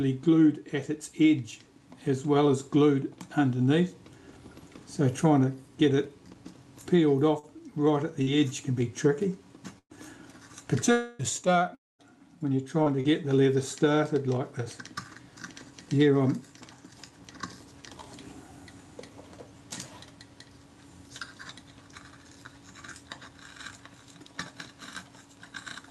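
Between 7.39 and 13.11 s, a handful of brief ticks, smears and hiccups break up the sound. These are scattered short gaps, roughly five small packet losses, the longest around a tenth of a second, each patched by stretching the preceding sound across the hole.

From 10.92 to 11.22 s, the sound turns into a fading buzzy continuation for about 0.27 s before normal audio resumes with that stretch missing. This is likely a long network dropout, with the receiver extending the last sound while nothing arrived.

A second fill runs from 11.75 to 12.02 s. It starts as a brief smeared continuation, then falls to near silence for about 0.2 s before the sound returns, skipping the lost portion. It is likely another long network dropout, the concealment fading out once no packets came. Throughout, the top end stops near 12 kHz, which fits an Opus call path running at around 64 kbps.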